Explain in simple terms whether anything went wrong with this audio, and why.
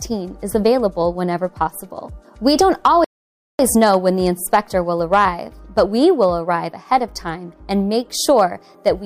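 At 3.04 seconds the sound suddenly drops to silence, and at 3.59 seconds it picks up again exactly where it left off, with nothing skipped. That half-second gap is a rebuffering stall. The player had played everything it had downloaded so far, so it had to wait for more audio to arrive before continuing. Nothing is missing, but the pause adds about 0.55 seconds to the playback.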